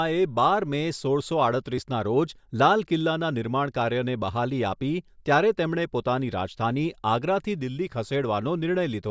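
Nothing stood out on listening to this recording.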